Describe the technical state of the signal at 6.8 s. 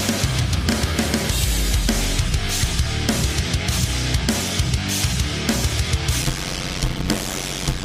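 At 6.8 s the signal is inside a block size mismatch (padded), running from 6.22 s to the end at 7.85 s. One stage hands over blocks shorter than the next stage expects, and each block's remainder is filled with silence. That repeated gap produces a buzz at about 92 Hz, and the audio plays at 0.533 times its normal speed while keeping roughly its usual pitch. This fits 256-sample blocks being read as blocks of about 480.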